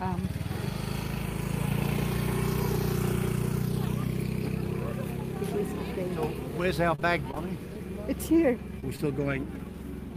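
From 6.95 to 7.38 s the sound turns choppy, with small pieces missing. This is repeated packet loss: several gaps, the longest about 26 ms, were each patched by extending the preceding sound.

At 8.80 s and again at 8.96 s there are brief smears, each a short concealed packet loss where about 20 ms never arrived and was filled by continuing the last sound.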